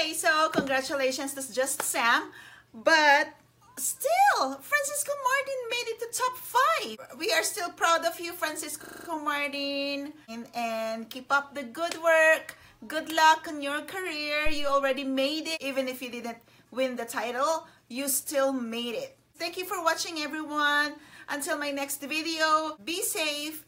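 System hang loop, 8.84 to 9.08 s: the driver stalled while hardware replayed one 40 ms buffer six times, giving a 25 Hz buzzing stutter.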